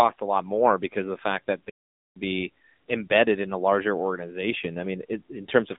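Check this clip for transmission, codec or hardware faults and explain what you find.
One fault runs through the whole clip: AMR narrowband mobile codec damage. The speech is squeezed into a phone band of about 200 Hz to 3.7 kHz, with nothing above 3.7 kHz. AMR-NB models the vocal tract and drives that model with a few pulses per short subframe. At low bitrates those pulses are sparse. The voice turns buzzy and synthetic, with a plainly audible coded edge. The damage fits a low mode, around 7.4 kbps.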